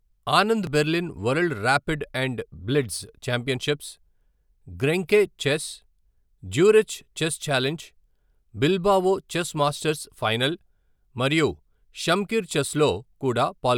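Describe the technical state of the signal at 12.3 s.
At 12.3 s the speech signal is intact, with no audible fault at that moment.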